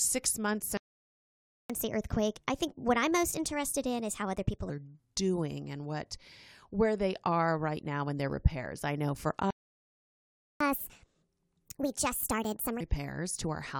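At 0.77 s the speech stops dead for about 0.92 s, a playback stall, likely the player running short of buffered data.

From 1.70 to 4.70 s the player works through its backlog at 1.25 times speed, so pitch rises roughly four semitones. This catch-up at higher speed comes from resampling, so speed and pitch climb together, unlike time-stretching, which keeps pitch fixed.

A second stall runs from 9.51 to 10.61 s, about 1.1 s of silence. A harder catch-up follows, at 1.5 times speed to 12.81 s, with the pitch up by about a fifth.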